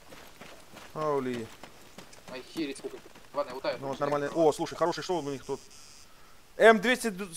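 Part of the audio was likely time-stretched by software that squeezed it to fit a shorter length, dropping short pieces to hold the pitch steady. From 2.67 to 5.11 s the section runs about 1.77 times faster, so the pace jumps abruptly and sounds rushed while the pitch stays unchanged.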